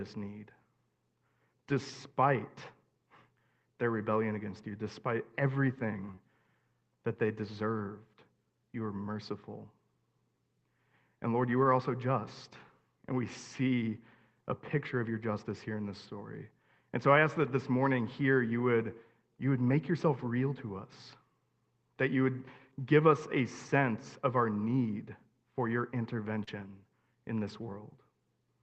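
Lost packet rebuilt from error correction at 6.07 s: a 20 ms stretch went missing, and the decoder played the low-bitrate backup copy carried in the following packet. There is no gap, but that moment turns briefly rougher and grainier.

Short concealed packet loss from 6.11 to 6.19 s follows straight after: two consecutive 20 ms pieces never arrived. The receiver extended the preceding sound to fill them, then blended back, so the speech smears and wobbles for a moment.

Lost packet rebuilt from error correction again from 11.63 to 11.65 s, just before "also just". It is another 20 ms patch that sounds coarse rather than silent. Then from 19.67 to 19.73 s, between "you would you would" and "yourself real to us", about 40 ms is rebuilt the same way, giving a longer noisy, degraded stretch.

Short concealed packet loss from 26.43 to 26.49 s, right after "our need for your": roughly 40 ms was bridged by continuing the last sound, heard as a brief smear. 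Its final 20 ms, from 26.47 s, was instead rebuilt from the error-correction copy, so the patch ends rough rather than smeared.

Throughout, the Opus call path limits the audio to about 8 kHz, and its coding noise points to a modest bitrate.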